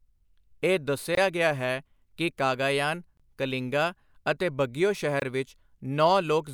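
Three short holes cut into this speech recording, each about 23 ms of silence: at 1.15–1.17 s, just before "ਗਿਆ ਹੈ ਕਿ ਕਾਗਾਯਾਨ"; at 3.17–3.20 s, between "ਗਿਆ ਹੈ ਕਿ ਕਾਗਾਯਾਨ" and "ਕਲਿੰਗਾ ਅਤੇ ਬਗੀਓ"; and at 5.20–5.22 s, right after "ਕਾਗਾਯਾਨ ਕਲਿੰਗਾ ਅਤੇ ਬਗੀਓ". These are gaps between chunks. The audio was handled in 2.0 s blocks, and silence was inserted at each join rather than sound being dropped, so the interruptions recur at that steady spacing.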